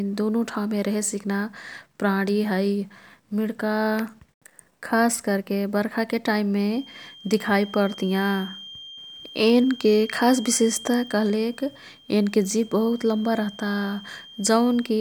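From 6.62 s to the end, a feedback whistle sits behind the speech. It is a thin, steady tone at 3.2 kHz, well below the speech level, swelling and fading slowly in level. The likely cause is a loudspeaker-to-microphone loop held just at the edge of feedback.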